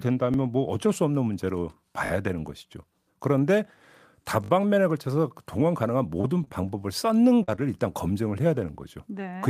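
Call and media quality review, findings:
Repeated buffer at 0.34 s, 2.06 to 2.10 s and 4.44 to 4.50 s. Playout device underran, so the same 20 ms slice was replayed once, twice, then three times. Heard as a rising stutter or buzz with hard joins. No speech lost.

Repeated packet loss (robotic sound) at 6.21 to 6.69 s. Network path had five holes, the longest 22 ms, and about 16% of the stretch was concealed by decoder continuation. Choppy speech with small pieces missing.

Short concealed packet loss at 7.43 to 7.50 s. About 40 ms never reached the decoder and was filled by extrapolating the last sound, then blended back. Brief smear or wobble, and a short consonant may drop.

Short stall from a late packet at 7.56 to 7.60 s. Jitter buffer ran dry when the packet arrived 22 ms late, so the decoder stretched the last sound for 22 ms and then resumed. Nothing missing, but the sound is held slightly long, with a faint buzz or dip.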